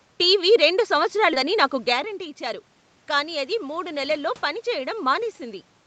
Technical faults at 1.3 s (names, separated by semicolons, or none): skip ahead